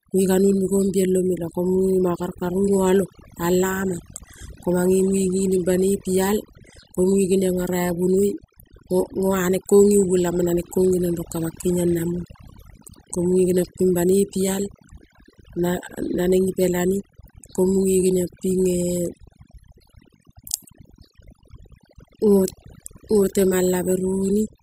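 Overdone noise removal runs through the whole speech clip: a noise reduction stage was set far too aggressively, so any frequency band it judged close to its noise estimate was pulled down hard or switched off entirely. Quieter parts of the voice fell under that threshold and were stripped along with the noise. Between phrases the background collapses into near silence scattered with twinkling specks.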